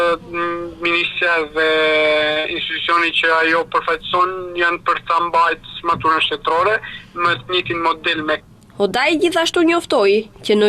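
At 2.31 to 2.38 s there is a short stall from a late packet. A packet arrived late, so the jitter buffer ran dry and the receiver held the last sound for about 46 ms before resuming from the same point. Nothing is skipped, and everything after it runs about 46 ms later, so the sound is stretched rather than cut.

Immediately after, at 2.40 to 2.46 s, comes a short concealed packet loss. Here about 40 ms of audio never reached the decoder, and the receiver covered the gap with roughly 43 ms of synthesized continuation. Unlike the stall, real material is gone, so this part sounds like a brief smear or wobble where a short sound may disappear, rather than a held one.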